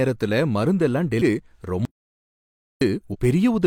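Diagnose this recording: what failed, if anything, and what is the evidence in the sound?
Two brief bursts of damaged data in the compressed stream, at 1.17 to 1.22 s and 3.09 to 3.16 s, point to the codec or storage stage. Each is a short glitch lasting roughly 40 to 60 ms. Corrupted or lost bytes leave the decoder unable to parse those frames correctly, so it emits garbage briefly, drops sync and resumes at the next valid frame header.

An audio dropout to silence runs from 1.85 to 2.81 s, removing about 0.96 s of speech. The speech cuts off abruptly, the gap is silent with no room tone, and speech resumes mid-flow. This points to the input side, before encoding: the likely cause is a lost input, such as a disconnected device or interrupted link, while the recorder continued writing silence, so the speech from that interval is unrecoverable.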